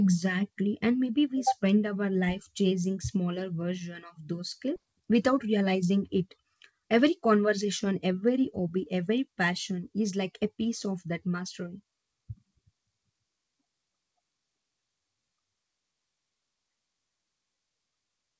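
At 4.76 s the speech jumps abruptly forward, with about a second of material simply gone and the two sides butted together with no gap. This is a skip ahead: a stretch of audio was dropped while newer audio was already queued, cutting the delay at once.

Right after, from 4.86 to 5.98 s, the speech runs noticeably quicker but keeps its pitch, at roughly 108 percent speed, and again from 6.54 to 10.56 s at about 107 percent. This is jitter buffer speed-up: the receiver, holding more audio than it wanted, repeatedly trimmed pitch-period-sized slivers, removing roughly a tenth of a second in the first stretch and about three tenths of a second in the second. Through the G.722 call path, nothing is heard above 8 kHz.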